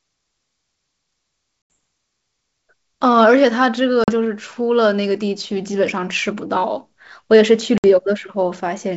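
Abrupt silent gaps at 1.72 s (80 ms), 4.04 to 4.11 s (40 ms) and 7.78 to 7.84 s (60 ms) return slightly distorted. This is packet loss on an ADPCM call: the lost packets desynchronised the decoder's predictor and step size from the sender's.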